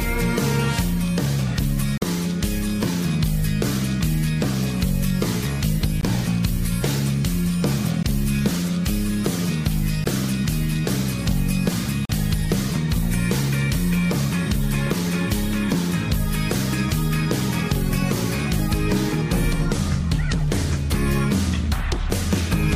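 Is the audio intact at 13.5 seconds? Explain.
Yes, at 13.5 seconds the audio plays through intact, with no dropout, click, distortion or other fault at that point.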